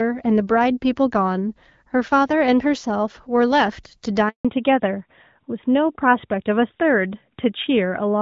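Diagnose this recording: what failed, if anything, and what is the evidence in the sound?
Network stage: a handover gap from 4.29 s to 4.45 s. The speech dies away within a few tens of milliseconds and stays silent for 160 ms. While the call moved between networks no speech frames arrived, so whatever was said then is lost.

Codec stage: a fallback to narrowband from 4.45 s to the end. Before the gap the AMR wideband (HD Voice) codec carries speech with light coding damage. Afterwards nothing above 4 kHz remains and the speech turns duller and rougher, which fits AMR-NB at 12.2 kbit/s.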